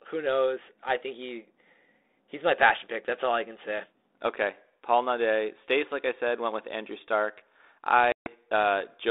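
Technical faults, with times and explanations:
8.12 to 8.28 s, packet loss on an ADPCM call: the telephone-band sound, held between 300 Hz and 3.7 kHz and carried by G.726 coding at 32 kbit/s, drops abruptly into a hard-edged silent gap of about 140 ms, which fits roughly seven lost packets. When the sound resumes, it comes back slightly distorted, because the decoder's adaptive predictor and step size have drifted out of step with the sender's. It settles within a few tens of milliseconds.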